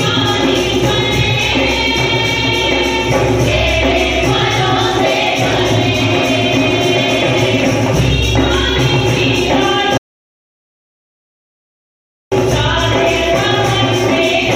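At 9.98 s the sound cuts off abruptly and the recording falls to silence until 12.32 s, when it resumes mid-flow. This is an audio dropout to silence lasting about 2.34 s. The gap holds no room tone or noise floor at all, so whatever occurred in that stretch is unrecoverable. The likely cause is a momentary loss of the input, such as a disconnected device, a failed link or an accidental mute, while the recorder kept writing silence.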